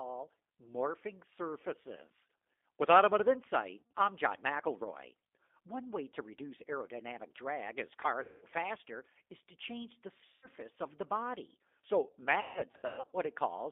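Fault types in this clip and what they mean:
G.729 codec: sound rebuilt at 8 kbit/s from filter and pulse coding within about 250 Hz to 3.6 kHz; its rough, synthetic texture sets it apart from plain band-limiting.
VoIP packet loss concealed by the speech codec: near 3.82, 8.23, 10.27 and 12.41 to 13.13 s, missing audio becomes a fading buzzy tone or coloured noise rather than silent gaps.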